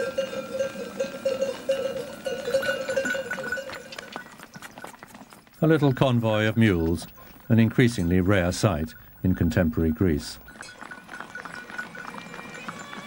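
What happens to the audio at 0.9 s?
Nothing goes wrong at 0.9 s; the audio there is intact and carries on without any audible fault.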